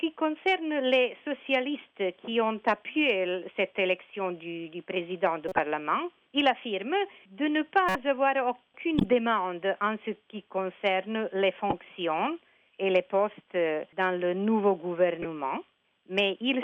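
A decoder playing corrupt frames, with flipped bits in the compressed stream misread as wrong gains and codes, throws energy into the wrong frequencies for a few frames at a time. The result is five short chirp-like bursts of noise in the audio, at 5.48 to 5.59 s, 7.89 to 7.96 s, 8.98 to 9.04 s, 11.70 to 11.73 s and 15.22 to 15.25 s. Each peaks around -10 dBFS, except the last, which is quieter at around -20 dBFS.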